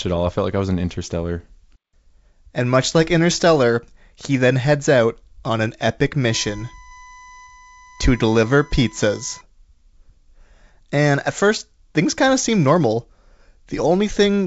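This speech clip has two faults. Bit errors on an ADPCM link flipped a small fraction of bits, and each error threw off the decoder's step size and predictor so the damage rang on briefly. The result is a rough pop with a momentary level jump from 0.38 to 0.42 s. Then from 6.30 to 9.41 s, USB whine from the bus's 1 ms frame timing leaks in through power or ground. It is a steady 1 kHz tone about 25 dB below the speech, riding over the clear G.722 wideband sound.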